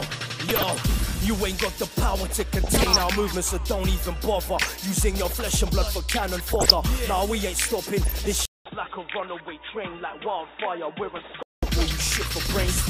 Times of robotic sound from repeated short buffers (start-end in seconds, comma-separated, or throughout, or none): none